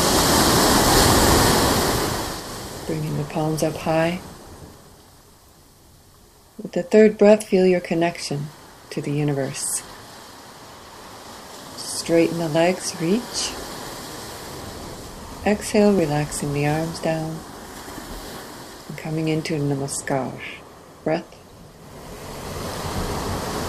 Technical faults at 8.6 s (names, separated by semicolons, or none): clock drift buffer slips